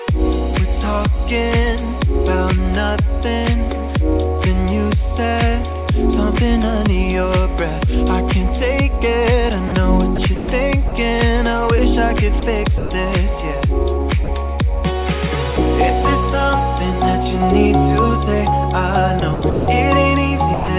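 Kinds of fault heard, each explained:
Sound dropped by the voice detector: at 9.68, 10.88, 12.40, 12.78, 14.24 and 20.54 s, sound gives way to steady comfort noise for 20 to 140 ms, likely from the sender misjudging quiet sound as background.
Sound chopped by the voice detector: from 10.16 to 10.48 s and from 19.2 to 19.68 s, sending likely switches on and off repeatedly, leaving choppy sound with holes filled by comfort noise.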